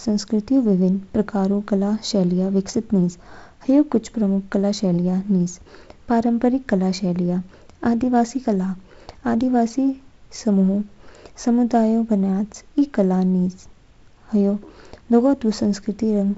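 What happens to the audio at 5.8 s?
Nothing goes wrong at 5.8 s: the speech continues intact, with only the light upper-band hiss and the ceiling near 7.7 kHz that come from the G.722 wideband telephone coding at 48 kbit/s.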